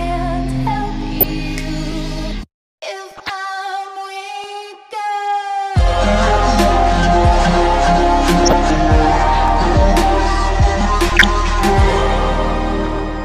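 The audio carries DAB burbling in six short bursts: 1.16–1.31 s, 3.11–3.30 s, 6.26–6.37 s, 8.43–8.53 s, 11.09–11.26 s and 12.84–12.99 s. Each lasts roughly 0.1 to 0.2 s. This is weak-reception corruption: a bit error rate of a small fraction of a percent lets errors slip past the error correction into the MP2 data. Damaged samples then put short noise blips into single sub-bands, and damaged scale factors throw individual sub-bands up or down in level, and a burst of that length points to several corrupted frames. There are also two overlapping chunks faults, at 4.44–4.46 s and 9.48–9.50 s, each a brief click or stutter where 20 ms of audio plays twice. The audio was handled in 2.5 s chunks, and at these joins the next chunk began before the previous one had finished, so the overlapping slice is repeated.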